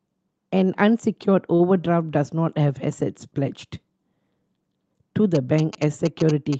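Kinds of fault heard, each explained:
Short stall from a late packet: At 1.55 to 1.62 s a packet arrived late and the jitter buffer ran dry, so the receiver held the preceding speech sound for about 41 ms, then resumed where it left off. Nothing is lost, but the sound drags briefly.
GSM signalling bursts: From 5.35 s to the end, a nearby 2G phone transmitting signalling bursts gets rectified in the audio circuitry, producing a galloping dit-dit-dit of short 217 Hz buzzes, sitting around 10 dB below the speech level.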